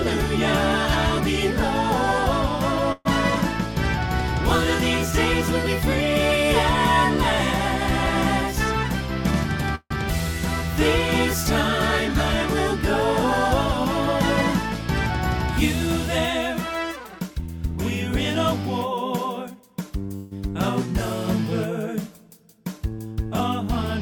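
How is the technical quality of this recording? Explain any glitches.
The recording has two kinds of network glitch: three short stalls and two stretches where the sound runs fast.

At 2.92 to 3.07 s, 9.75 to 9.92 s and 20.16 to 20.33 s the sound briefly stalls into a fading buzz. These are call audio freezes, likely caused by delayed packets emptying the jitter buffer. The receiver extends the last sound for about 130 to 150 ms. At 9.75 s this decays into roughly 50 ms of silence, and at 2.92 s into about 20 ms. Playback then resumes where it stopped, so nothing is lost and a gap is inserted.

From 15.87 to 17.78 s the audio plays hurried at about 109% speed with unchanged pitch, and from 18.48 to 19.91 s at about 105%. This is jitter buffer speed-up. After the buffer overfilled, the receiver cut many tiny pitch-period slices to reduce delay. The first stretch removes roughly 200 ms and the second around 70 ms, which compresses timing without shifting pitch.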